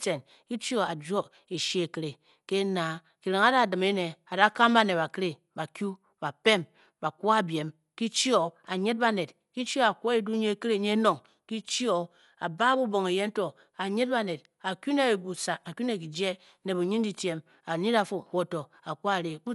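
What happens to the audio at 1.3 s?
At 1.3 s the speech is dull and band-limited, with nothing above about 11.5 kHz. The same damage runs through the whole clip. A rough, fluttering noise clings to the voiced sounds. The likely cause is Dolby Digital compression at a low bitrate, around 64 kbps. The encoder drops the top band and starves many frequency lines of bits, and the decoder fills them with noise.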